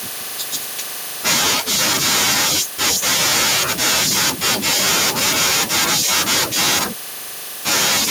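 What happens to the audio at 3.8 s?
At 3.8 s the speech is inside a stretch of microphone overload running from 1.26 to 6.84 s. The loudest syllables break up into a harsh, crackling buzz. The likely cause is input gain set about 9 dB too high, so peaks slam into the converter's ceiling and their tops are sliced flat, on the order of 7 percent of samples. A limiter would instead duck the level smoothly, with pumping and no added grit.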